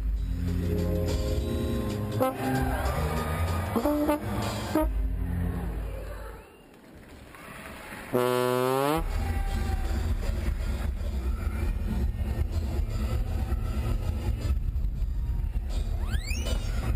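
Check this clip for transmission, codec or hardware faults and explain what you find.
There is one fault. Repeated frames at 1.56 to 1.74 s: a single compressed block of about 93 ms was delivered again, and the decoder played it two extra times. The sound stutters and runs about 186 ms longer.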